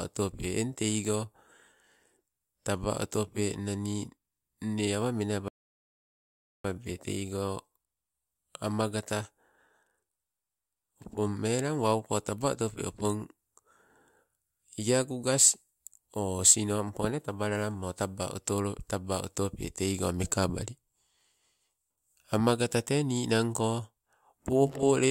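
At 5.48 s the speech stops dead and goes silent until 6.65 s. This is a rebuffering stall. The player used up its downloaded audio and waited for more. Playback then resumes exactly where it stopped. Nothing is skipped, but about 1.16 s is added.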